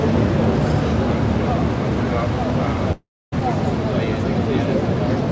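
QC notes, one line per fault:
2.92–3.34 s, long network dropout: likely lost packets drop 0.4 s of audio; the last sound fades out as a buzz or hiss, then 0.27 s of silence.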